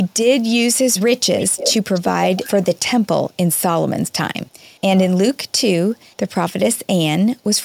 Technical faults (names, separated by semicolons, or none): echo leak; speech suppressed in double talk